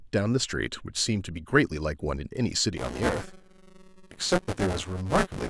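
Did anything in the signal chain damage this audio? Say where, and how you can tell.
Yes, at the driver or buffer stage: buffer tearing from 2.76 s to the end at 5.50 s. The writer and the hardware reader of the ring buffer have slipped and now cross mid-period, so about a third of each buffer replays speech from about 20 ms earlier, with hard joins either side. That repeats at 188 Hz, which fits a 128-sample buffer, and is heard as a steady robotic buzz riding on the speech.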